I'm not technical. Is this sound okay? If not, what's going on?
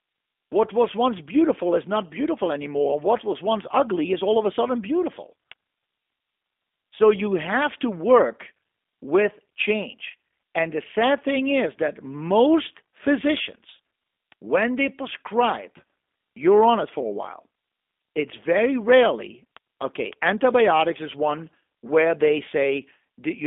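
No. Throughout the clip, the G.729 codec rebuilds the speech from a rough model rather than sending it whole, so it sounds thin, slightly rough and artificial.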